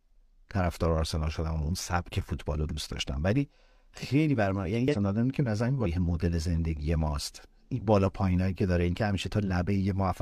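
Speech with two brief bursts of damaged data in the compressed stream, at 4.88 to 4.95 s and again at 5.81 to 5.87 s, each about 60 to 70 ms long. At both points the speech is interrupted by a short glitch as the decoder misreads corrupted frame data, loses sync, and has to find the next valid frame header before normal playback resumes.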